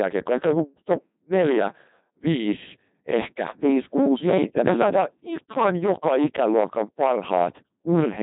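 From start to finish the speech is hard clipped. The level drives about 12 dB past what the chain can pass, so every loud peak is sliced flat, and around a tenth of the samples were pushed past that limit. The flattened peaks add a harsh fuzz to each stressed sound, and on a spectrogram that shows as smeared harmonic energy on every loud moment.

Running through the whole clip as well is the sound of the Codec 2 vocoder. The original waveform is gone. The voice has been rebuilt from pitch, voicing, energy and a coarse spectral outline, and the heavy damage fits its 2.4 kbit/s mode. The result is robotic and buzzy, with the rasp from the clipping folded into that synthetic tone. A spectrogram shows evenly spaced, overly regular harmonic lines, blurred formants, and nothing above 3.8 kHz.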